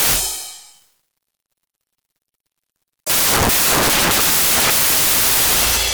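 Loud, harsh broadband noise covers the music from start to finish. These are samples built from the wrong bytes: the reader misassembles each sample's bytes, so the rapidly changing low-order bits end up dominating every value.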